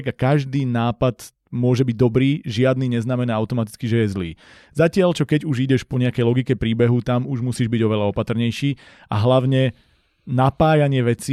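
No technical faults can be heard anywhere in this speech recording. There is nothing at any point that needs a time marker or further explanation.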